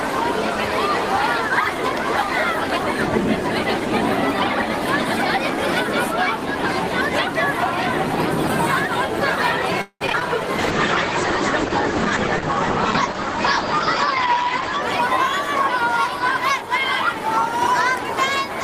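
From 9.81 to 10.23 s there's repeated packet loss, giving that robotic sound. Several holes land in quick succession, and each is papered over by stretching the last bit of audio. Over half that span is concealed, the longest patch about 191 ms, with some pieces simply missing, so it comes out choppy and robotic.

Then from 10.59 to 14.89 s you get a call bitrate drop. It sounds like the encoder fell to something around 10 kbps for roughly 4 seconds. The coarser coding makes the sound rough and watery, and the top end gets cut around 8 kHz, so it's muffled until it recovers.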